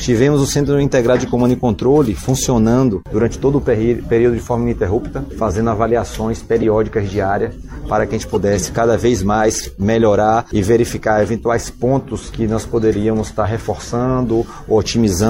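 A short, harsh blip cuts through the sound at 6.62 to 6.64 s, and a second, slightly quieter one follows at 8.34 to 8.37 s. The first peaks about 5 dB above the second. These are corrupt frames decoded: bits inside the compressed data were flipped, and the decoder played the damaged frames anyway, placing misread energy at the wrong frequencies. The first burst spans a couple of frames, the second about one.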